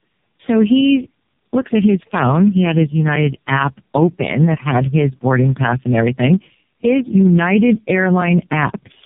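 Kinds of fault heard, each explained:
Tandem speech coding: the call was decoded and coded again by three low-rate speech codecs in a row, a chain that fits G.729A, iLBC and AMR-NB near 5.9 kbit/s, with plain telephone links between them. Each coder rebuilt an already damaged signal, so the errors piled up. The speech sounds rough, muffled and warbly throughout, with nothing above 3.5 kHz, a stronger smearing than any single one of those codecs would leave.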